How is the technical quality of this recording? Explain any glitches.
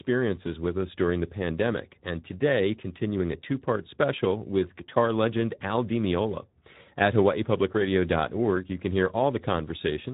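The quality is limited by plainly audible Speex codec damage that runs through the whole recording. Speex is a CELP coder: it models speech as a filter driven by an excitation signal, and at the rate this sounds like, roughly 11 kbps, too few bits describe that excitation, so the speech comes out hoarse and grainy with a noisy texture. Nothing reaches above about 3.8 kHz. Unlike a simple low-pass filter, the damage sits inside the voice itself, not just in the missing treble.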